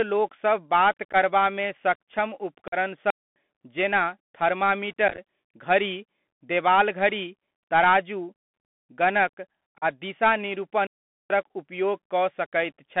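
The whole clip sits on a Bluetooth CVSD headset codec link, and it's plainly audible. The speech is squeezed into roughly 200 Hz to 3.5 kHz, which fits a 64 kbps CVSD path. That one-bit-per-sample delta coding can't keep up with loud high-frequency bursts, so you get a gritty, granular hiss under everything, scratchy s sounds, and distortion wherever the level jumps quickly.

The first unconcealed Bluetooth headset packet loss hits at 1.13 to 1.15 s. About 11 ms of audio, a few packets' worth, just vanishes with hard edges. At 2.68 to 2.75 s it's bigger: about 45 ms, something like ten packets, gone with nothing filled in. That's a clear chop, and on CVSD the speech comes back a touch quieter for a moment.

Then at 3.10 s there's a digital wireless dropout. The receiver gives up and mutes cleanly for about 257 ms, until 3.36 s. It's a neat hole of near silence, with no noise burst on either side.

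Back to packet loss at 5.08 to 5.19 s, just before "घड़ी देवाल घड़ी". Here about 49 ms is lost, scattered over roughly 98 ms in runs no longer than about 11 ms. That comes across as a short crackly, chopped patch. Another loss at 9.78 to 9.84 s takes out about 37.5 ms, roughly ten packets, with the same abrupt edges.

Finally, a second wireless dropout mutes 10.87 to 11.30 s, about 435 ms. It's again a clean silent gap and just a longer one.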